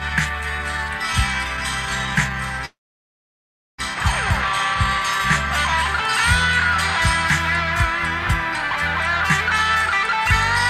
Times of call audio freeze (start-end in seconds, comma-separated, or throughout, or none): 2.65-3.80